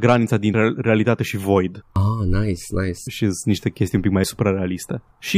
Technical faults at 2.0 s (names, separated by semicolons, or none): dropped buffer (overrun)